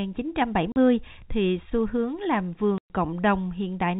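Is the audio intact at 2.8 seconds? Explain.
No. Packet loss filled with silence runs from 2.78 to 2.9 s, just after "thì xu hướng làm": about 120 ms of lost packets, likely six 20 ms packets, replaced by a hard-edged gap of silence.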